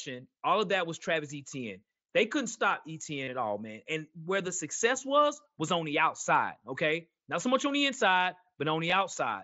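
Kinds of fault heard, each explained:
Concealed Bluetooth headset packet loss: voice packets from headset to phone were lost, and the receiver filled each gap by repeating recent waveform. After "couldn't stop", a brief buzzy held tone precedes "at all man". After "much on the inside", short scattered gaps are nearly hidden.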